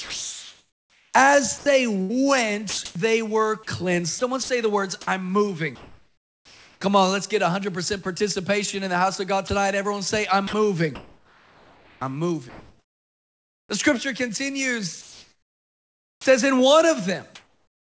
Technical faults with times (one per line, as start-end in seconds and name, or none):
0.00-6.81 sound chopped by the voice detector
8.03 sound dropped by the voice detector
9.47-9.49 sound dropped by the voice detector
10.47-13.69 sound chopped by the voice detector
15.01-16.25 comfort noise in place of the background
16.18-16.25 onset clipped by the voice detector
17.35-17.86 comfort noise in place of the background